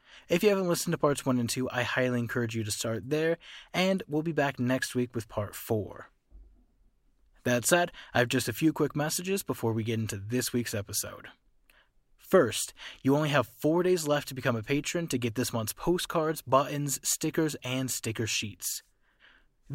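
No faults turn up anywhere in this speech recording.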